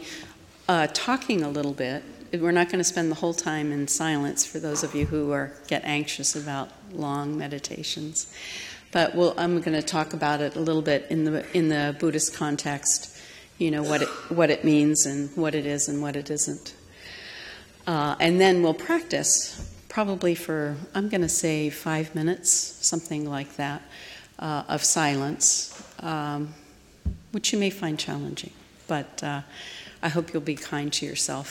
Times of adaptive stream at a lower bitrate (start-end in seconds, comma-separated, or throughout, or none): 8.27-20.27